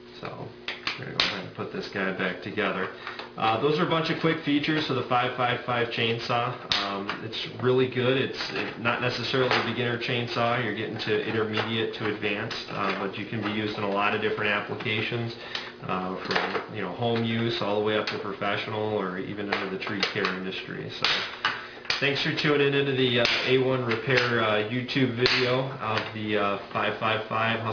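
Aliasing runs throughout: energy above 5.5 kHz folds back to unrelated lower frequencies, sounding gritty and metallic, consistent with unfiltered downsampling to 11 kHz.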